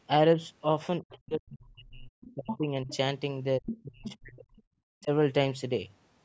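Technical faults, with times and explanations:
1.01–2.88 s, 3.59–4.61 s and 4.97–5.10 s: speech suppressed in double talk. The speech sinks sharply, by roughly 35 to 40 dB at its deepest, across about one and a half seconds in the first span, about a second in the second, and a brief dip in the third. This is likely an echo canceller that could not tell the local talker from the far side's loudspeaker sound while both were active, so it attenuated everything.
2.21–2.58 s, 2.89–2.97 s, 3.66–3.82 s and 4.06–4.17 s: other side's voice leaking through. A second voice surfaces in short scraps, roughly 10 dB below the main speech in the first and third bursts, about 15 dB below in the fourth and around 20 dB below in the brief second one. This is likely residual loudspeaker echo that the canceller failed to strip from the microphone signal, falling inside or just after the suppressed stretches.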